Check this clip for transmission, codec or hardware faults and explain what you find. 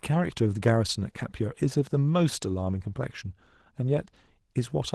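There's one fault here: Opus voice compression runs through the whole speech clip. The low band is coded by SILK's linear prediction, with a CELT layer on top, and the excitation is coarsely quantised. So speech sounds plainly hoarse and slightly robotic, which fits roughly 16 kbps.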